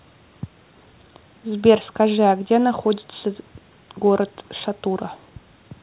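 No faults detected in the speech; the band stops at 4 kHz as expected from a call path, which fits 64 kbps G.711 mu-law telephony coding.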